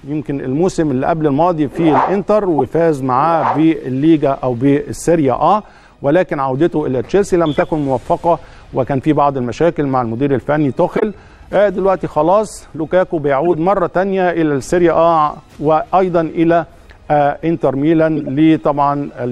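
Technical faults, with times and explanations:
2.58 to 18.28 s, corrupt frame decoded: brief chirps or noise bursts at 2.58–2.73, 7.56–7.63, 10.97–11.03, 13.46–13.55 and 18.16–18.28 s, where a few damaged compressed frames were decoded anyway, putting energy at the wrong frequencies.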